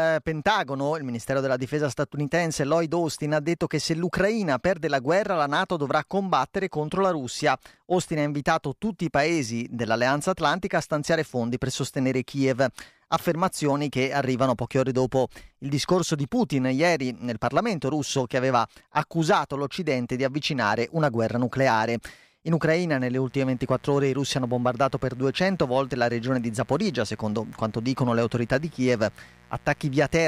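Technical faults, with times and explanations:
23.26 to 30.28 s, mains buzz: a steady, raspy buzz runs under the speech, roughly 30 dB below it. Sharp switching spikes arriving twice in each 60 Hz mains cycle leak into the signal, stacking harmonics of 60 Hz up into the kilohertz range.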